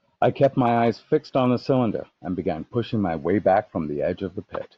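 From 0.15 s to 4.77 s the speech carries clock slip clicks: a faint, steady tick about every 70 ms, around seventy in all, clearest on the louder syllables. The likely cause is two unsynchronised clocks drifting apart by a few hundred ppm, so a single sample is dropped or repeated each time the error reaches one sample. A spectrogram shows evenly spaced thin vertical lines through voiced passages. The waveform shows tiny one-sample discontinuities.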